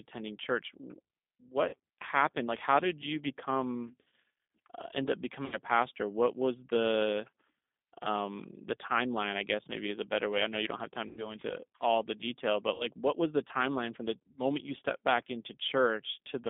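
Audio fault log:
throughout G.729 codec: a G.729A stream at 8 kbit/s confines the speech to about 250 Hz to 3.6 kHz and rebuilds it from a vocal tract filter, a pitch predictor and sparse pulses. That gives a plainly rough, synthetic grain within the voice itself, which a simple band-limit would not produce.
1.69–1.76 s, 3.88–4.12 s, 5.46–5.57 s, 11.09–11.35 s, 12.74–12.87 s VoIP packet loss concealed by the speech codec: gaps of 40, 100 (scattered in short runs over 240 ms), 60, 80 and 60 ms are filled by a fading extension of the last sound into a buzzy tone or coloured noise, and the voice stays weak just after, as before "happened like how did" and "what was the timeline". Unlike plain dropouts, there is no silence or click.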